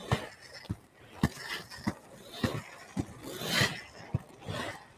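A noise suppressor built for speech stays active for the whole clip. It treats sustained tones, ambience and decay as noise, so the level keeps swinging by roughly 10 dB. Held sound sinks while onsets survive, which leaves the audio pumping and thinning.

From 0.77 to 1.15 s, the suppressor cuts sound, mistaking it for noise and pulling it down by up to about 7 dB. From 4.23 to 4.43 s it does the same, with a dip of about 6 dB. Each time the sustained part drops away and its tail is cut short.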